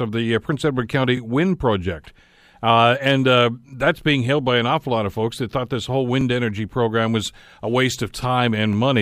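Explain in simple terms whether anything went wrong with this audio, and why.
Overlapping chunks show up three times, at 1.17–1.19, 6.21–6.23 and 8.73–8.75 s. The speech was handled in 2.5-second pieces that each began slightly early, so a 20 ms sliver plays twice at those joins, giving a quick click or stutter.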